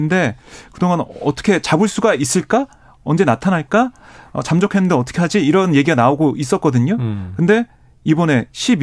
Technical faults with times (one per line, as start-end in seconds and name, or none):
none